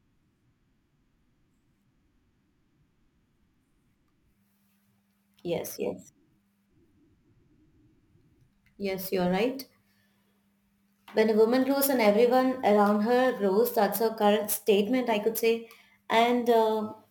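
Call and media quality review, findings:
Crude rate conversion, whole clip. Gritty, inharmonic fizz riding the speech, strongest on loud and sibilant passages. Error sits roughly 20 dB under the signal. Samples are repeated, not filtered, which fits a 44.1 kHz to 48 kHz conversion.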